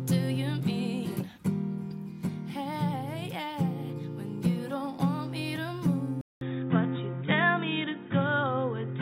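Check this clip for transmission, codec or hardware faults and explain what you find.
One fault stands out. At 6.21 s the sound drops out for 200 ms, then returns duller and boxier to the end. This is an input switched to a poorer device. The recording likely moved mid-take to a different microphone or a headset's call profile. That path passes nothing above 3.8 kHz, so the upper detail vanishes. The loudness barely changes. A new background noise floor appears, roughly 45 dB below the signal.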